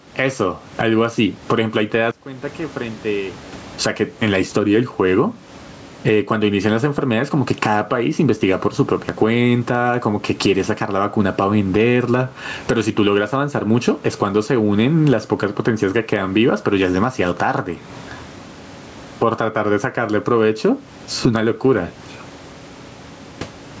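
Gain pumping runs through the whole of this speech recording, with the level swinging by around 20 dB, likely from input gain set far too high and a fast limiter clamping down. One channel inverted, from 2.11 to 3.61 s, makes the centred speech almost disappear, dropping by about 23 dB and leaving a faint residue, likely because the reversed-polarity channel cancels the other when the two are summed to mono. The room's background noise and the call processing's band limit at 8 kHz sit underneath both faults.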